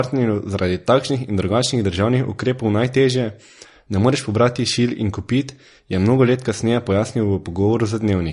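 From start to finish, the speech carries plainly audible MP3 compression damage: nothing above about 10.6 kHz, watery swirling in the upper range, and a likely low bitrate near 40 kbps.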